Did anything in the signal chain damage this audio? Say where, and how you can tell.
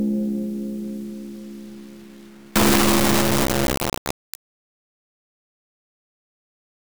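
Yes: at sample-format conversion, samples built from the wrong bytes from 2.56 s onward make loud broadband noise, a full-band spectrogram.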